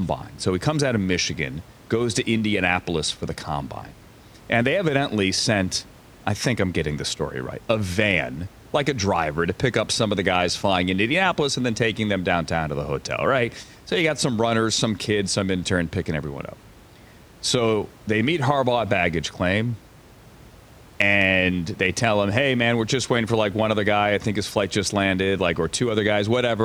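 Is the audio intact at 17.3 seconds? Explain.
Yes, the speech at 17.3 seconds is intact, with only the room's own background noise sitting about 25 dB below it.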